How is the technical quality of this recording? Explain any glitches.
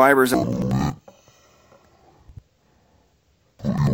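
The recording has one fault that runs from 0.34 s to the end.

Interleaved audio read as planar, from 0.34 s onward: each block of alternating left and right samples is split in halves, with the first half treated as one channel and the second as the other. Both halves then play at half speed side by side. The blocks last about 93 ms, which fits a 4096-sample buffer, so the sound drops an octave, seems doubled, and chops at about 10.8 Hz.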